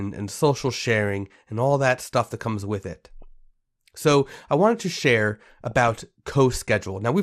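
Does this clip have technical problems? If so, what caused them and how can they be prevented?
Yes. Throughout the speech the sound is dull and carries a gurgling, granular texture as upper bands flicker in and out. This is likely MP2 compression, whose coarsely quantised sub-bands point to a rate around 80 kbps. Encoding at a higher bitrate prevents it.

DAB burbling appears at 0.57–0.74 s, at 3.22 s and at 5.71–5.98 s as short blips of noise. Reception bit errors, on the order of a fraction of a percent, corrupt sub-band samples and scale factors. Better antenna placement or signal strength prevents it.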